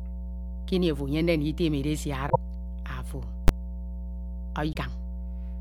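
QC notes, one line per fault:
Throughout, mains hum: a steady 60 Hz tone sits under the speech for the whole clip, strong enough to be only a few decibels below the speech itself. Power-line current is leaking into the signal path, most plausibly through a ground loop or from a transformer close to the cabling or gear. The hum comes from that fixed electrical source, not from the recording, so it holds the same pitch and level regardless of what is being said.
2.26–2.36 s and 4.69–4.76 s, damaged data in a compressed stream: two short glitches, about 100 ms and 65 ms long, break into the speech. At each point the encoded bytes are corrupted, so the decoder either misreads those frames or throws them out, loses its place, and scans forward for the next valid frame header.
3.48 s, invalid numbers at full scale: a single hard bang. A processing step produced infinite or undefined values for one block of roughly 12 ms, which fits a 512-sample block, and those values were clamped to the maximum sample value. 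The output jumps to one extreme value, far beyond the speech peaks, and stays pinned there until the block ends. Because the block is so short, the snap at its start and the snap at its end merge into one loud crack.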